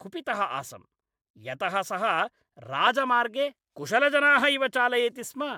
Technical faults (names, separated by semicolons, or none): none